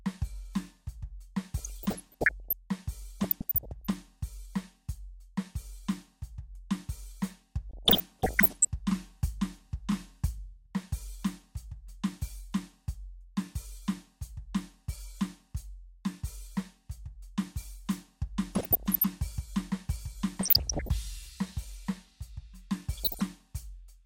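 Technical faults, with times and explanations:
1.58–2.53 s, 3.20–3.96 s, 7.71–8.68 s, 18.55–19.04 s, 20.41–20.89 s and 22.97–23.22 s: DAB burbling. The music gets short noise blips laid over it in these stretches. That's weak reception letting bit errors, somewhere around half a percent, slip past error correction into the MP2 stream. Corrupted samples put short blips of noise in single sub-bands, and corrupted scale factors make sub-bands jump in level for up to a frame.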